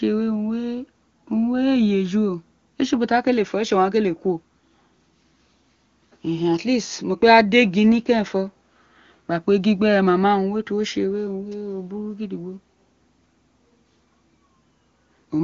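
Nothing goes wrong anywhere in this speech, which comes through the AMR wideband (HD Voice) codec at what sounds like one of its higher rates, with the usual wideband ceiling leaving nothing above about 7.4 kHz.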